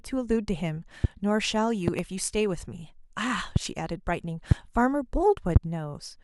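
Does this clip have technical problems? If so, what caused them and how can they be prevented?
Yes. Loud pops hit at 1.04, 3.56, 4.51 and 5.56 s, each about 25 ms long, with a double pop from 1.88 to 2.02 s. Each is far louder than the speech, which continues underneath. The likely cause is voltage spikes from a loose plug, switch or static. Secure and ground all connections.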